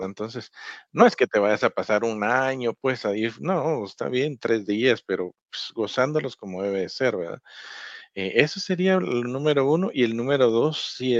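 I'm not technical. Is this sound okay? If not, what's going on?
Yes, the speech is technically fine: it passed through an ordinary internet call connection working as it should, which keeps frequencies only up to 8 kHz and so sounds a little less bright than a studio recording, and nothing in it has gone wrong.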